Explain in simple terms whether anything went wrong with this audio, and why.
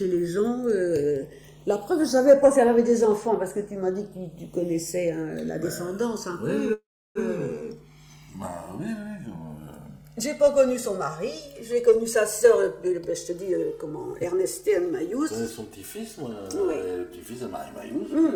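Three things went wrong. First, channels drifting apart: the left and right sides were recorded on devices whose clocks disagree slightly, around 200 parts per million, so their offset creeps to a few milliseconds by the end. Played together, this gives a slow, swirling flanging across the whole clip.

Second, a call audio freeze from 6.73 to 7.18 s, likely caused by network packets arriving late so the receiver ran out of audio. It stretched the last sound into a fading buzz or hiss, then silence for about 0.32 s, before resuming where it stopped. Nothing was lost, but the sound now runs 0.42 s late.

Third, a jitter buffer speed-up from 12.02 to 16.15 s: the receiver had stored too much audio and trimmed out tiny slices to catch up, around 0.4 s in total. The sound plays at 110% speed with unchanged pitch, so it seems hurried.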